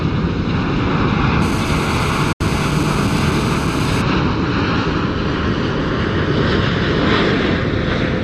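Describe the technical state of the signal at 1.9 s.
At 1.9 s a hard, raspy buzz sits over the sound, a steady tone near 217 Hz thick with harmonics and unrelated to the material beneath it, at about 13 dB below the signal. This is GSM phone buzz, present from 1.42 s to 4.02 s. A nearby 2G phone transmitting in bursts about 217 times a second, here during a call, has its radio pulses rectified by the audio circuit, producing this constant interference.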